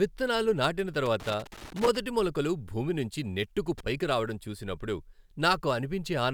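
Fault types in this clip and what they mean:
Loose connector crackle: a worn or dirty contact in the signal path keeps making and breaking, so the speech is chopped into an irregular scratchy crackle. It runs from about 1.06 to 1.97 s after "విత్తనాలు నాటిన", then returns briefly from 3.78 to 3.86 s after "మొలకలు భూమినుంచి నెట్టుకు". Unlike steady vinyl surface noise or evenly spaced digital clicks, it comes in uneven bursts, as if the cable is being moved.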